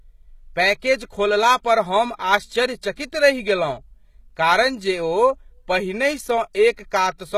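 Speech runs throughout with plainly audible HE-AAC compression as the likely cause: the treble stays bright, yet s sounds come out gritty and lispy because the top band is copied up from lower frequencies. That distinguishes it from a dull low-pass cut, and the damage fits roughly 20 kbps.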